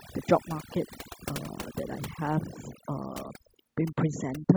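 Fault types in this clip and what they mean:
overdone noise removal: Noise reduction set too hard mutes individual frequency bands near its noise estimate throughout this speech, leaving near-silent pauses dotted with twinkling specks, unlike a noise gate, which cuts everything at once rather than band by band.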